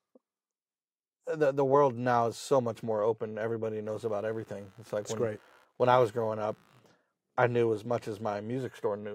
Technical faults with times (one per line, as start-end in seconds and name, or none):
3.85-6.95 computer activity noise